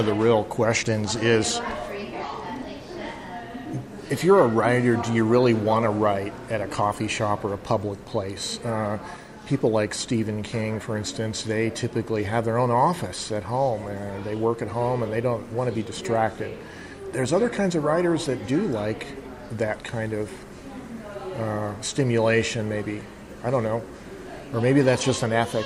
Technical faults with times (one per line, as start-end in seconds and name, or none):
none